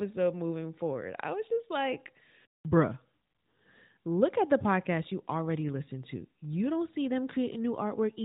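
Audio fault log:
No faults heard anywhere in the speech recording, so nothing to log.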